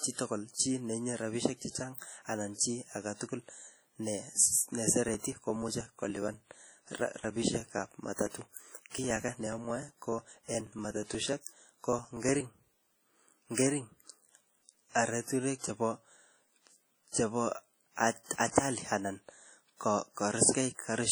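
It's a speech clip with heavy codec damage throughout: a ringing, washy quality and a hiss that swells and fades with the talker, likely from WMA compression at a low rate, which fits around 32 kbps, where long transform blocks smear quantisation noise and drop weaker components. There's also pre-echo at 8.13 to 8.19 s and again at 18.51 to 18.55 s. A brief hiss runs ahead of a sharp onset, spread over about 55 ms and 44 ms, because the noise meant for the loud attack fills the whole block, including the quiet bit before it, and the onset comes out smeared.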